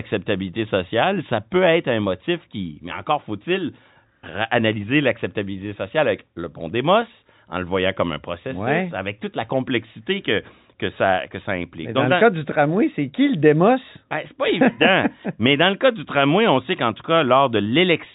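No technical faults are audible.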